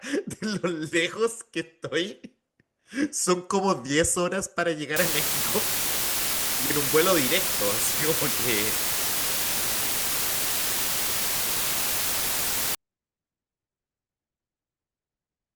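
The clip is speech, and from 4.96 s to 12.75 s it suffers low bit depth with dither. Over that span the audio is carried with only 3 bits, and dither noise was added before rounding. The quantisation error is therefore decorrelated from the signal and turns into a steady, even white hiss rather than gritty distortion. Because so few levels are available, the hiss sits at roughly the same level as the speech itself.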